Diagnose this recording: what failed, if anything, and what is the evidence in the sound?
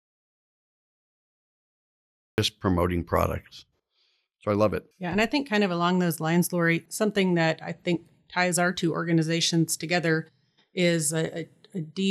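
Audio dropout to silence, likely a lost input link: silence without room tone runs until 2.38 s, where speech enters mid-flow at "promoting products".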